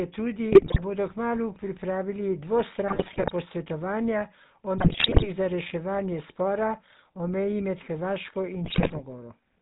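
The speech has passed through the GSM full-rate codec, which fits a 13 kbps stream: the vocal tract is modelled and driven by a sparse, regularly spaced pulse excitation, with nothing kept above 4 kHz. The result is a plainly audible buzzy, gravelly roughness over the whole clip.

GSM bit errors then corrupt the decoder's filter, pitch and gain values, bending the spectrum and jolting the level frame by frame. The sound breaks into squawks, pops and gargling from 0.52 to 0.80 s, 2.88 to 3.30 s, 4.78 to 5.30 s and 8.64 to 9.01 s.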